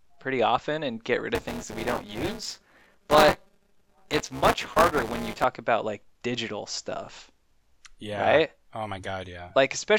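A speech clip with two faults. From 1.35 to 5.44 s there is buffer tearing: the program filling the ring buffer and the hardware reading it have drifted into each other, so they cross in every period. Roughly a fifth of each period holds audio about 20 ms stale, one lap old, joined by hard edges on both sides. The result is a steady robotic buzz at 200 Hz, riding on the speech only while sound is present. Then at 7.06 s there are repeated frames: one compressed block of 26.1 ms, which fits an MP3-style frame, was delivered twice, so the decoder plays the same slice again. That produces a brief stutter and stretches the audio by 26.1 ms.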